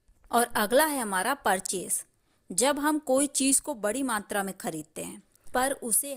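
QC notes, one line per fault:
No faults detected in this clip.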